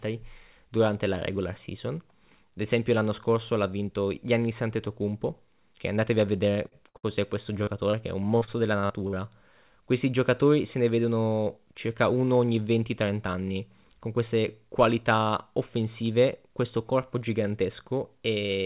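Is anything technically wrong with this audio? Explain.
Yes. Between 6.7 and 11.6 seconds this speech passes through a cluster of network faults. The whole recording is also band-limited, with nothing above 4 kHz, which points to a narrowband G.711-type call codec.

Short stall from a late packet, at 6.68–6.79 s and 6.97–7.06 s: the sound hangs for a moment, then carries on. The jitter buffer ran dry, so the receiver stretched the last sound by about 38 ms and then 63 ms until the packet arrived. Nothing is lost.

Burst of packet loss, at 6.89–6.97 s: the sound is held and fades, and then jumps ahead. Consecutive packets never arrived in time. The receiver extended and faded the last sound for about 48 ms, and roughly 30 ms of real audio is gone.

Short concealed packet loss, at 7.63–7.70 s and 7.91–7.96 s: each is a brief smear or wobble. About 30 ms of audio missed the decoder each time. 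The receiver patched the hole by continuing the preceding sound, for 35 ms and 22 ms, before blending back into the real signal.

Repeated packet loss (robotic sound), at 8.38–9.16 s: this stretch sounds choppy. Five separate gaps, the longest 49 ms, were each filled by extending the prior sound. About a quarter of the span is synthetic fill, and 120 ms of real audio is missing.

Jitter buffer speed-up, at 10.78–11.58 s: the speech sounds slightly hurried, about 7% fast, with the pitch unchanged. The buffer had built up surplus delay, so the receiver trimmed short pitch-period slices, around 70 ms in total, to catch up.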